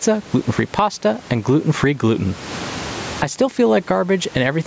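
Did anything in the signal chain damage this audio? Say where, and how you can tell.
Yes. Gain pumping throughout: the gain swings roughly 25 dB, likely from excessive microphone gain driving a fast limiter.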